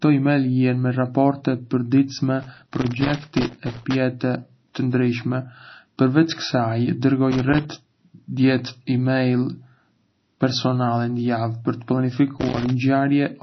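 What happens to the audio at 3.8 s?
At 3.8 s the audio is inside a burst of loose connector crackle running from 2.42 to 3.95 s. A worn or dirty contact makes and breaks as it shifts, chopping the signal, so the sound comes through as irregular scratching and crackle.

Underneath, through the whole clip, nothing reaches above 6 kHz, and there is plainly audible watery, swirly smearing. This likely comes from MP3 compression at a low bitrate, consistent with about 24 kbps, where weak frequency lines drop in and out between frames.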